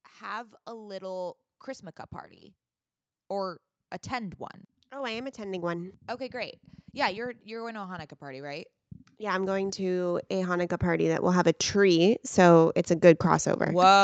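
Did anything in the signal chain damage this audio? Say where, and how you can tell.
Yes. Automatic gain rising in the call processing stage: from 3.27 s to 12.64 s, starting just before "it's a", speech and background swell together by about 16 dB. The AGC judged the input too quiet and raised gain gradually rather than in a step.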